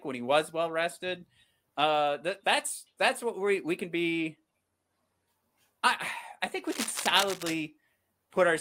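Cable scratch noise runs from 6.66 to 7.54 s: dense, uneven bursts of scratching and rustling sit over the speech, roughly ten decibels below it. The likely cause is a worn cable or connector being moved, its contact resistance fluctuating rapidly.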